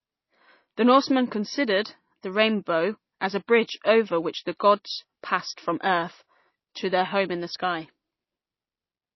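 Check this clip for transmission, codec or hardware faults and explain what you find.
One fault runs through the whole clip: the speech carries plainly audible damage from what is likely MP3 compression. Nothing remains above about 5.8 kHz. The encoder was short of bits, which points to a rate near 24 kbps. So it cut the treble at a fixed point. It also dropped weak frequency lines that flicker on and off between frames. The result sounds dull, watery and swirly. Consonant attacks smear.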